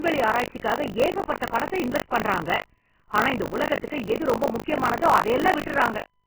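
From start to end the speech carries heavy codec damage. The treble is cut off and what remains up top turns to hissy, grainy noise, with roughened tones and smeared onsets. That is likely Vorbis compression at a very low bitrate, somewhere near 10 kbps. Unlike a simple low-pass, the lost detail comes back as noise.

Also throughout, buffer tearing puts a robotic 50 Hz buzz on the speech. The writer and reader of the ring buffer have slipped and cross within each period, which fits a 20 ms period. About a fifth of each buffer repeats audio from roughly 40 ms earlier, with hard joins on both sides. Unlike mains hum, the buzz disappears whenever the speech stops.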